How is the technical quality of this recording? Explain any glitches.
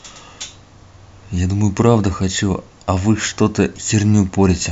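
No technical faults are audible.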